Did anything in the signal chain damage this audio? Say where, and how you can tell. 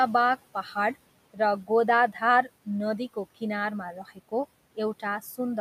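Yes. Speech cut by the noise suppressor, in call processing. From 3.94 to 4.33 s, about a tenth of a second of soft sound drops about 17 dB, mistaken for noise.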